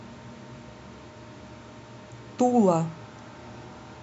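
A short bit of speech, and nothing technically wrong turns up anywhere in it.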